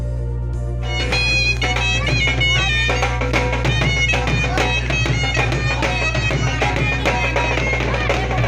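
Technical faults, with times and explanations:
Throughout, mains hum: a steady low tone at 60 Hz, with some low harmonics above it, sits under the whole clip at roughly the same loudness as the sound itself, so it never drops away between passages. Power-line current is leaking into the signal path, through a ground loop or a nearby transformer. Unlike rumble or handling noise, it keeps a fixed pitch and level from start to finish, and it has the tonal hum of mains rather than the hiss of broadband noise.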